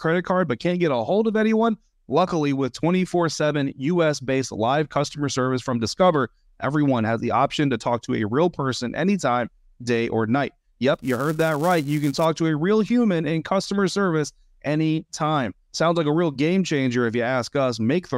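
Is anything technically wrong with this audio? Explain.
Yes. From 10.94 to 12.25 s, between "anytime day or night" and "to a real human", the speech carries a filter restarted on every block fault. The filter drops its memory at each block boundary and restarts from silence, so every block opens with a small transient. These repeat at 345 Hz, which fits a 128-sample block, and are heard as a buzz whose loudness follows the speech level. Unlike buffer dropouts, there are no gaps, and the ticks are strictly regular.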